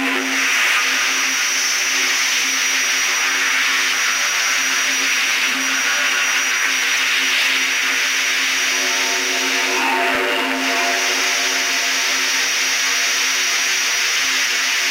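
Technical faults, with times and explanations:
14.15 to 14.29 s, DAB burbling: right near the end there's a short burst of burbling laid over the sound that comes and goes in about 0.14 s. That's weak reception letting bit errors, at a low rate well under a percent, slip past the error correction into the MP2 data. Corrupted samples put short blips of noise in individual sub-bands and corrupted scale factors make sub-bands jump in level for up to a frame, and the length fits roughly six MP2 frames being hit.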